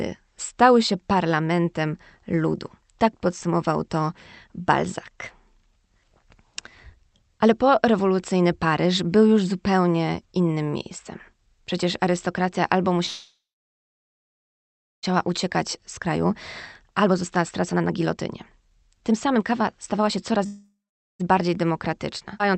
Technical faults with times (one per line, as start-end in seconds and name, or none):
13.05-15.05 call audio freeze
15.28-16.26 jitter buffer speed-up
16.82-20.46 jitter buffer speed-up
20.46-21.21 call audio freeze
21.31-22.56 jitter buffer speed-up
22.39-22.42 skip ahead